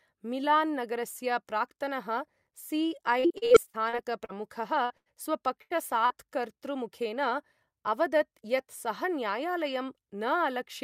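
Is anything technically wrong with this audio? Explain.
Yes. The speech suffers packet loss in three forms, concentrated between about 3.2 and 6.1 s.

From 3.19 to 4.35 s there is repeated packet loss with a robotic sound. Nine separate holes, the longest about 47 ms, are each patched by extending the preceding sound, so roughly a quarter of that stretch is synthetic. Because the holes come in quick succession, the result is a sustained choppy texture with pieces missing rather than isolated blips.

Short concealed packet loss occurs at 4.86 to 4.93 s and 6.06 to 6.13 s, with about 40 ms missing each time. The decoder bridges each gap by continuing the last pitch or noise and then blends back in. Each one is heard as a single brief smear or wobble, not a run of them.

Bursts of packet loss occur at 4.98 to 5.09 s and 5.62 to 5.73 s, with about 80 ms missing each time. The concealment holds the last sound and fades it out, producing a buzz or hiss that dies away before the speech resumes further along. 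They are longer than the short losses, and each stands alone rather than repeating.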